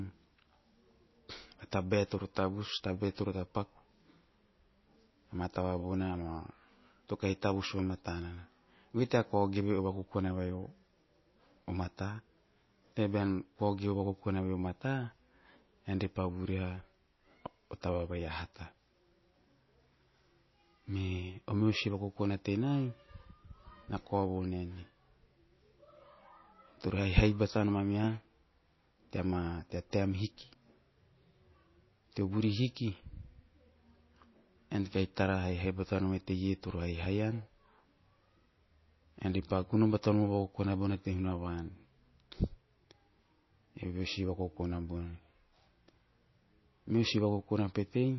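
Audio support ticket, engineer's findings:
Speech band-limited throughout, nothing above 5.8 kHz. Watery, swirling texture, metallic chirp on s sounds. Likely MP3 compression at a very low rate, around 24 kbps. Starved encoder drops treble, toggles weak lines frame to frame. Plain low-pass would lack the swirl.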